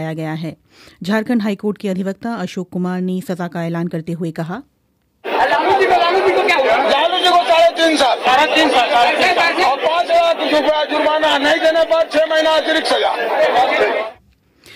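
Nothing here stands out as a technical problem; the audio just runs along without any glitch or defect worth flagging.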